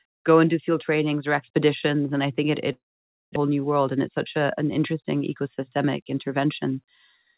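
After "and i think it", from 2.72 to 3.38 s, the sound trails off into a fading buzz and then about 0.53 s of silence. This is likely a long network dropout, with about 0.6 s never recovered. From 3.43 to 3.62 s, a jitter buffer slow-down repeats pitch periods to rebuild its reserve. Playback runs at 85% speed with unchanged pitch, stretching the audio by 35 ms.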